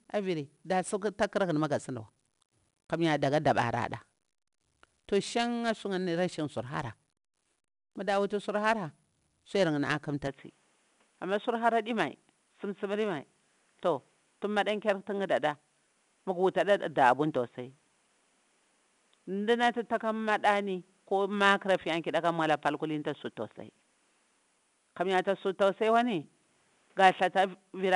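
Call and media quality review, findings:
Gritty, level-tracking hiss riding on every loud syllable, roughness on sharp onsets, dull top with nothing above 10.7 kHz, whole clip. 4-bit ADPCM compression: coarse per-sample steps, adaptive step size lagging on attacks; fits an 88 kbps stream.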